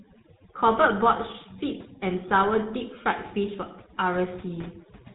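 A noise reduction stage set far too aggressively runs through the whole recording. It is an overdone noise removal that drives individual frequency bands down or off wherever they sit near its noise estimate, taking quieter parts of the speech with them. The background drops and breaks up into twinkling specks.

Across the same span the signal has also passed through the GSM full-rate codec, which rebuilds the vocal tract from a model and excites it with sparse, evenly spaced pulses, a coarse scheme that fits a rate of about 13 kbps. Nothing survives above 3.8 kHz, so the speech is muffled and carries a plainly audible buzzy, gravelly roughness.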